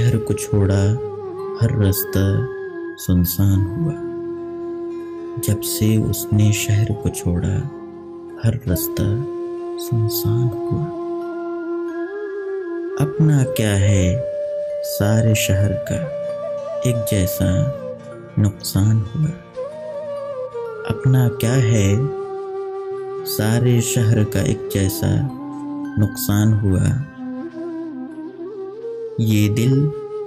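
Hard clipping runs throughout: peaks exceed the stage's limit by about 2 dB, under half a percent of samples, squared off flat on the waveform, adding high harmonic streaks on transients.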